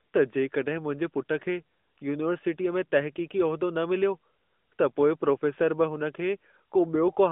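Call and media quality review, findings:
No faults found in this clip.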